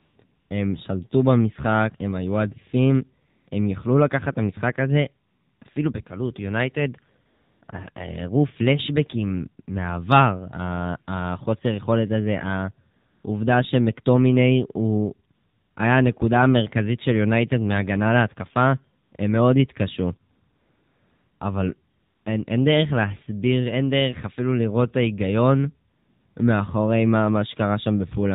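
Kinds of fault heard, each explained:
AMR narrowband mobile codec, throughout: 7.4 kbps coding through a vocal-tract model at 8 kHz sampling removes everything above 4 kHz and leaves speech plainly buzzy.
AMR comfort noise, thirteen gaps between 0 and 26.4 s: speech frames stop for 20 ms to 1.08 s, and smooth synthetic noise switches in, replacing the background.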